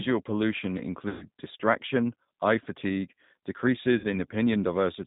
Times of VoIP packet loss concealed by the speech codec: 1.09-1.28, 3.98-4.07

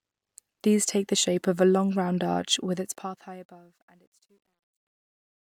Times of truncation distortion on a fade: 2.64-5.46

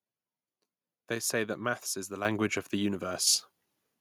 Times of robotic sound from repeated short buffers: none

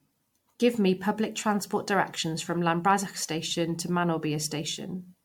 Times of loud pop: none

